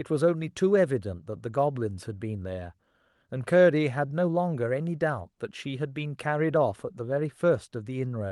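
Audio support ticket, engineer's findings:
No audible faults found.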